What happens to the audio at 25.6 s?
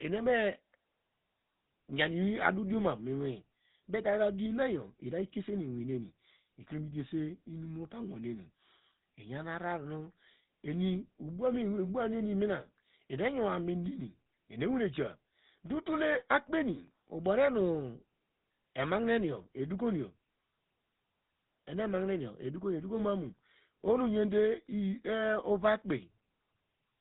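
At 25.6 s the speech carries GSM full-rate codec damage, present across the whole clip rather than at that moment alone. The coder models the vocal tract and drives it with evenly spaced pulses, keeping only a third of the excitation samples, which fits the 13 kbps full-rate scheme. Nothing above 4 kHz survives, and the voice has a plainly audible buzzy, gravelly roughness. That grainy texture separates it from simple narrowband filtering, which dulls sound without the buzz.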